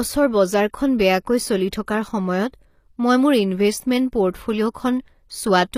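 Throughout the speech, the treble sounds rebuilt rather than captured. S sounds turn gritty and metallic, and nothing reaches above 15.5 kHz. This is likely HE-AAC compression copying lower bands upward, with plainly audible damage that fits a low bitrate near 24 kbps.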